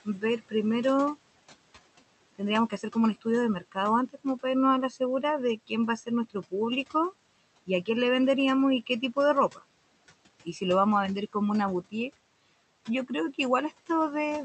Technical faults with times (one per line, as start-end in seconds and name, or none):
0.00-14.45 noise suppressor artifacts
0.05-0.53 speech cut by the noise suppressor
2.38-6.95 speech cut by the noise suppressor
8.86-9.63 speech cut by the noise suppressor
12.87-13.88 speech cut by the noise suppressor